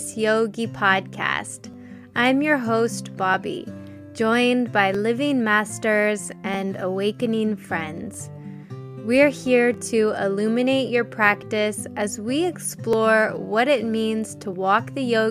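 Regular clicks recur every 1.6 s from 0.14 s to 14.53 s, about ten in all, while there is sound. This is likely clock drift buffer slips. Two clocks disagree by a few hundred ppm, so a buffer periodically drops or repeats a small block of samples, which fits roughly 30 samples each time.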